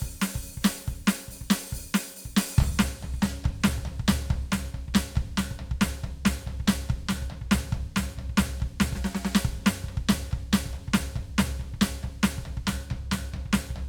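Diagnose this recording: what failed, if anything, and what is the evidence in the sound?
Nothing failed here that the ear can pick up: the music runs along steadily with no dropouts, clicks, distortion or glitches at any point in any of the stages you'd normally suspect.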